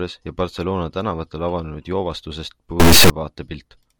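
From 2.80 to 3.10 s the speech gives way to a harsh, extremely loud buzzing square wave, an integer read as float fault. The raw sample bits are being interpreted as floating-point numbers, which fits 32-bit integer data read as 32-bit float, so values come out near zero or far beyond full scale. On the waveform this section slams between silence and the clipping rails. The spectrogram shows dense broadband energy with strong harmonic stripes across the whole band.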